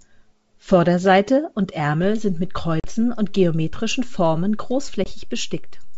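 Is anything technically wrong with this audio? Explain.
Yes, there are two faults in this speech, carried over G.722 wideband telephone coding at 64 kbit/s.

DC step at 2.04 s: the waveform's zero line jumps and holds to the end, giving a low thump while the speech continues unchanged.

Packet loss on an ADPCM call at 2.80 to 2.87 s and 5.04 to 5.08 s: about 40 ms, then 20 ms, goes silent, fitting roughly two packets and one. The decoder's predictor and step size lose track of the sender's, so speech resumes after each hard-edged gap slightly distorted before settling.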